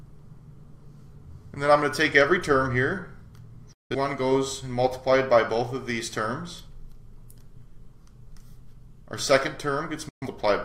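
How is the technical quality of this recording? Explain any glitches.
Two brief gaps of silence mar the recording, from 3.73 to 3.95 s and from 10.09 to 10.27 s. Both are digital broadcast dropouts. The receiver lost valid frames, which fits roughly four and then three failed frames, and muted with a very fast 3 ms fade. Unlike concealment, which fills gaps, each hole is true silence, and the missing material never returns.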